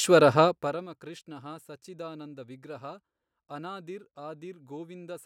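From 0.44 s to 0.88 s there is zipper noise. The level drops by roughly 20 dB over this stretch. It falls in 2 dB steps instead of a smooth ramp, about thirty steps a second. Each jump changes the waveform abruptly and leaves a tiny click. Strung together, the clicks form a fast ticking, a zipping texture laid over the speech while the level falls.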